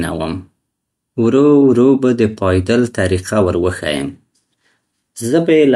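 No technical faults can be heard at any point in the recording, and the signal stays stable throughout.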